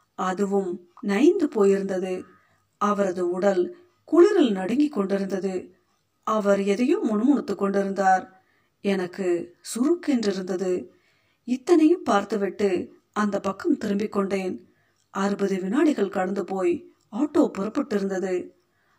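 Speech runs for the whole clip with channel delay (comb filtering): one channel arrives around 20 ms late and the mono sum cancels at regularly spaced frequencies, starting near 30 Hz. The result is a steady rough, slightly doubled quality on every word from start to finish.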